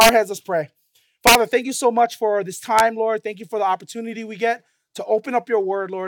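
Right at the start, from 0.01 to 0.09 s, there's integer overflow: peaks run about 3 dB past the integer limit and, instead of being held, wrap to the opposite sign, so the waveform flips across the full range. It comes back from 1.27 to 1.35 s, pushed about 4 dB over, and once more as a brief snap at 2.79 s, right at the limit. Each one is a violent crack, far harsher than ordinary clipping.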